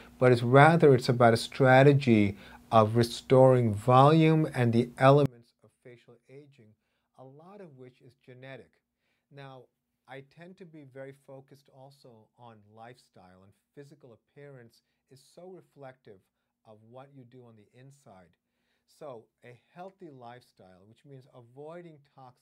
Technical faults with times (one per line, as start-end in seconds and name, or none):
5.26-22.41 one channel inverted